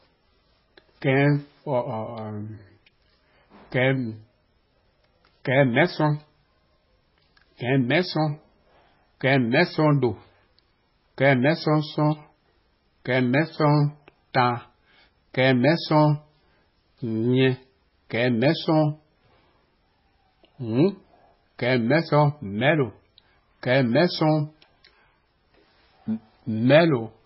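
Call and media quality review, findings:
Speech watery and swirly throughout, heavy codec damage, attacks smeared, nothing above 5.6 kHz. Likely MP3 compression at a very low bitrate, consistent with about 16 kbps. Encoder drops weak frequency lines frame to frame and cuts treble at a fixed point.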